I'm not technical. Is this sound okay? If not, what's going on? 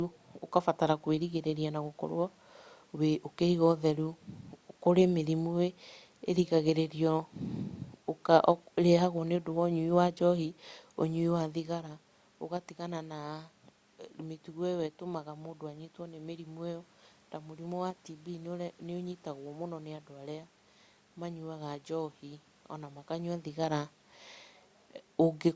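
Yes, it's fine: the background noise is just the room, and the speech getting quieter or louder around 11.5 and 23 seconds is only the person moving relative to the microphone.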